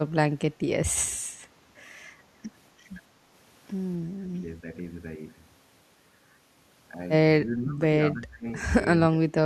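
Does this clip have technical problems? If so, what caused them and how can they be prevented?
Yes. The speech dips sharply four times, at 4.3 to 4.66 s, 7.43 to 7.8 s, 8.13 to 8.46 s and 8.98 to 9.37 s. The drops range from about 10 dB to about 30 dB, and the last is deepest. This is speech suppressed in double talk, likely an echo canceller that mistook the talker for loudspeaker echo while the far side spoke. On a spectrogram the energy thins or vanishes in patches, and the waveform shows notches in the envelope. A canceller with robust double-talk detection and less aggressive residual suppression, or a headset that removes the echo path, would prevent this.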